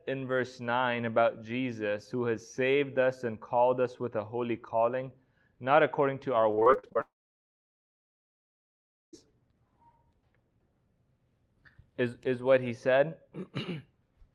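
From 6.51 to 6.97 s, repeated packet loss (robotic sound) leaves eight gaps up to 43 ms each, patched by extending prior audio, giving choppy texture. From 7.01 to 9.19 s, a briefly extended buzz or hiss gives way to about two seconds of silence, likely a long network dropout, before audio resumes with that stretch lost.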